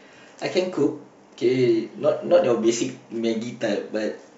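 A short speech recording, and nothing in it is technically wrong. No moment in the audio calls for a time or a cause to be pinned on it.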